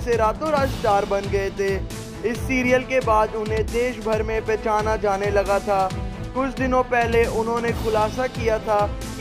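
No technical faults can be heard anywhere in the recording; the signal stays continuous and intact throughout.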